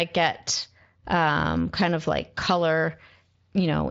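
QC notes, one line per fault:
No faults; the speech runs over a Speex codec path, with nothing above about 7.6 kHz.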